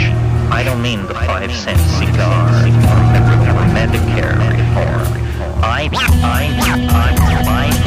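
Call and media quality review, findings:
No audible faults found on review; no transport, device or processing issue identified, nothing to action.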